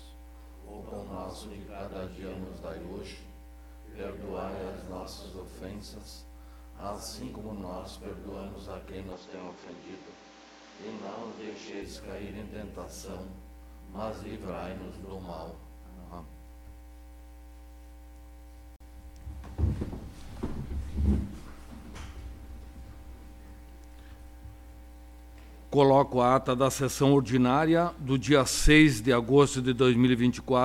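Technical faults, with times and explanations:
9.12–11.82 s, input switched to a poorer device: The sound abruptly turns duller and narrower, with nothing above 7.6 kHz, then opens up again at 11.82 s. There is no silence at either change and the loudness barely shifts, but a new background noise appears, roughly 30 dB below the signal. The likely cause is the recording input briefly jumping to a lower-grade microphone or a headset call profile, whose restricted bandwidth and own noise floor replace the original path.
18.76–18.80 s, gap at a join of encoded pieces: A 42.5 ms hole of silence cuts into otherwise continuous sound, with edges smeared by the codec, and the audio resumes exactly where it left off. This happens when separately encoded segments are spliced without trimming: the start-up delay the encoder inserts and the padding in the final frame of the previous piece both remain, leaving a short dead stretch at the seam.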